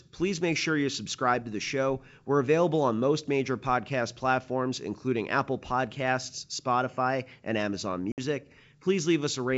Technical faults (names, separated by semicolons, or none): packet loss on an ADPCM call